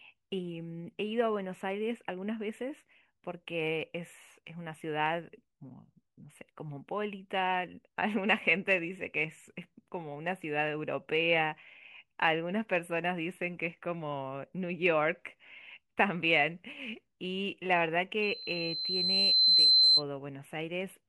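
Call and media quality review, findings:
Loudspeaker feedback squeal, 18.22–20.03 s: single 4.1 kHz tone swelling over about a second and a half to roughly 10 dB above the speech. Mic hearing its own speaker, loop gain topping one at that frequency.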